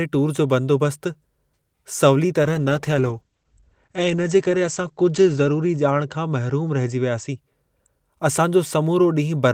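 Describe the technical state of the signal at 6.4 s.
At 6.4 s the signal is inside a call bitrate drop from 2.44 to 7.43 s: the encoder starves, coding coarsely and cutting content above 8 kHz, so speech sounds muffled and rough, consistent with roughly 11 kbps.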